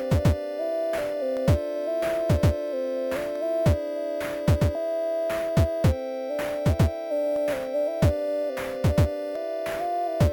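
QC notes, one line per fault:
1.37–9.36 s, periodic USB or driver dropouts: about five ticks, one every 2.0 s, each a gap of well under a millisecond filled with silence as the driver stalls. Waveform shows brief flat notches; spectrogram shows evenly spaced thin vertical broadband lines.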